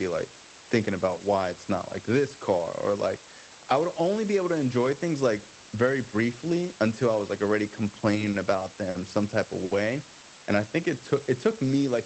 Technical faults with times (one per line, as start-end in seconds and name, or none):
0.00-12.05 low bit depth with dither
8.00-8.96 repeated stalls (stutter)
9.65-9.72 short stall from a late packet
10.23-10.81 jitter buffer slow-down